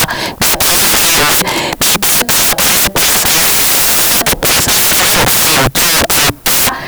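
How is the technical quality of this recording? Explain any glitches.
Technical quality is very poor: the speech is buried under loud broadband hiss for the entire recording. Throughout the clip, the samples are built from the wrong bytes. The reader misassembles each sample's bytes, so the rapidly changing low bits land in the high-order positions and become loud broadband noise. The waveform looks like a dense block and the spectrogram like a flat wash across all frequencies.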